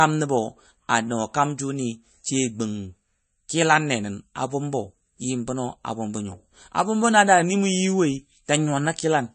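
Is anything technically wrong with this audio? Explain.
Yes. The speech carries plainly audible MP3 compression damage throughout the clip. Nothing is present above 8.3 kHz, a hard treble cut-off. This is likely MP3 encoding at a low bitrate, around 34 kbps. With so few bits, the encoder drops the top band entirely. It also zeroes weak frequency lines, which flicker on and off between frames. The result sounds watery and swirly. The s sounds turn chirpy and metallic, and attacks smear.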